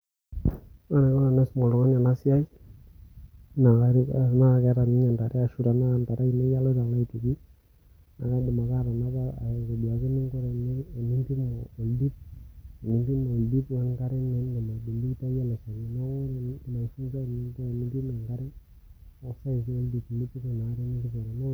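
Listening to this speech recording, nothing technical stood out as wrong at any point.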